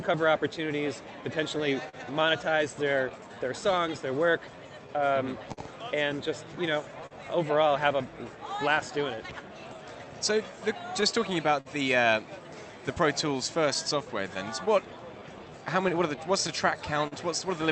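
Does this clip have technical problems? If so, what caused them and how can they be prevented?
Yes. The tempo feels faintly unsteady throughout, with small hiccups recurring at uneven intervals. This is clock drift between sender and receiver: the sender's clock runs roughly 3% slow, so the receiver's jitter buffer keeps draining and must be topped up. Prevention: resample against the measured clock offset continuously rather than correcting in bursts.

From 0.64 s to 16.78 s, repeated timing corrections make the sound run slightly slow, at 99% speed, with brief stretched or doubled fragments. The receiver repeats short pieces to keep pace with the slower sender, adding roughly a fifth of a second overall. Prevention: use smooth, drift-compensating playout so the corrections cannot be heard.

Between 1.58 s and 17.14 s, around twenty brief ticks and smears appear, the longest roughly 40 ms. 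These are scattered short gaps: late or lost packets, each patched by extending the preceding sound, concealing roughly 400 ms in total. Prevention: add forward error correction and a slightly deeper jitter buffer. The Opus call path behind all this limits the sound to about 8 kHz.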